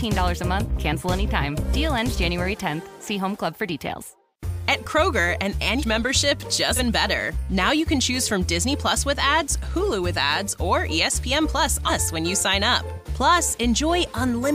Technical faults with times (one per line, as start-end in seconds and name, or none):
5.78-5.83 compressed frames skipped
6.76-6.80 compressed frames skipped
11.87-11.91 compressed frames skipped